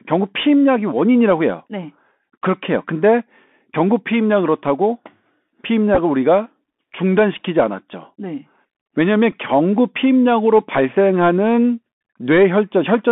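Narrow, telephone-like speech with a scratchy edge on s sounds and a fine granular hiss throughout, confined to roughly 200 Hz to 3.5 kHz. This is the Bluetooth CVSD headset codec, whose one-bit slope coding fits a 64 kbps stream and cannot follow fast high-frequency detail. At 5.95 to 5.98 s, brief buzzy roughness comes from a Bluetooth headset packet repeated: lost packets were replaced by replaying the previous packet's bits, in short runs of a few milliseconds. A brief glitch at 9.32 s comes from two repeated packets of the same kind.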